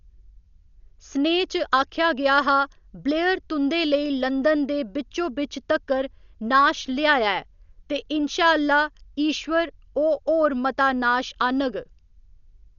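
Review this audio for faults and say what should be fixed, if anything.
Throughout, the speech sounds dull, with nothing above 6.9 kHz and rough, fluttering noise around voiced tones: likely heavy Dolby Digital compression, which fits roughly 48 kbps, with empty bands dither-filled. Encode at a much higher bitrate or from the original source.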